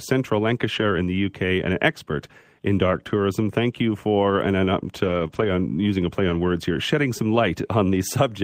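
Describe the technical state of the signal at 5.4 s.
At 5.4 s the speech is being played from a lost packet rebuilt from error correction. From 5.31 to 5.45 s, 80 ms of audio, consistent with four 20 ms packets, came from the low-bitrate copies carried in later packets. There is no gap. The sound turns rougher and noisier.

That stretch begins straight after a short concealed packet loss from 5.27 to 5.31 s. About 20 ms never arrived. The decoder extended the preceding sound to fill it, then blended into the rebuilt frames. This can be heard as a brief smear or wobble.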